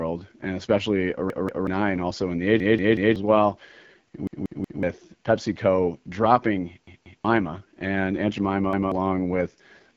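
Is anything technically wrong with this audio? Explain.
Yes. The speech has two faults.

The first runs through the whole clip. It is the AMR wideband (HD Voice) codec at 8.85 kbit/s, one of its two lowest rates. The codec models the vocal tract and drives it with sparse pulses. At this rate there are too few bits to place those pulses well. The voice comes out rough and raspy. The damage is plainly audible. Nothing is heard above about 7.5 kHz.

The second is a repeated buffer, heard five times. Each time, new audio arrived late, so the device replayed its last block of about 186 ms, which fits an 8192-sample buffer. Each repeat starts with a hard join, giving a stutter. At 1.3 to 1.67 s, just after "and especially", the block plays two extra times. Then "and also in the" follows. At 2.6 to 3.16 s, right after "and also in the", it repeats three times. At 4.27 to 4.83 s it repeats three times. 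At 6.87 to 7.25 s it repeats twice. At 8.73 to 8.92 s it repeats once. At each stutter, somewhere between a fifth and a half of a second of speech never plays.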